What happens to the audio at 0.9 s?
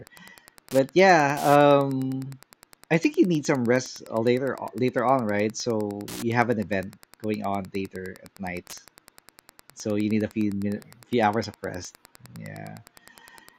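At 0.9 s, as throughout the clip, Wi-Fi interference ticks under the speech about ten times a second, roughly 25 dB below it. A nearby radio's 102.4 ms beacon is rectified by the audio circuit, drawing evenly spaced thin vertical broadband lines on a spectrogram.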